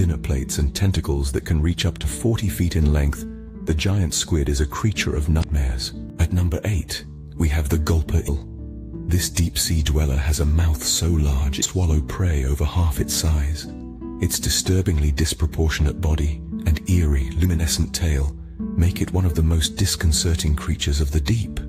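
Around 5.40 to 5.44 s there's a quick glitch: damaged data in the compressed stream, so the decoder misreads those frames and loses sync briefly.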